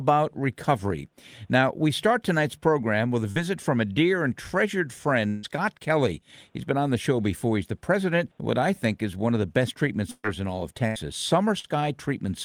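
At 3.31 to 3.39 s, just before "from a dear and", there is a brief smear where the sound is stretched over a gap. This is short concealed packet loss: about 40 ms never arrived in time, and the receiver bridged it with 43 ms of continued sound before blending back in. The same smear returns at 11.59 to 11.67 s.

From 5.28 to 5.46 s, right after "a dear and treasured", the last sound is drawn out as a fading buzz or hiss for about 154 ms with no silence, then the audio resumes further along. About 160 ms is missing, most likely from a long network dropout.

At 10.11 to 10.26 s, between "of the best treatment" and "in all of", the last sound is held and dies away into about 40 ms of silence before the audio picks up again. This is a burst of packet loss: about 120 ms was lost and 123 ms was filled. A shorter burst at 10.87 to 10.98 s loses and fills about 80 ms with a similar fading hold.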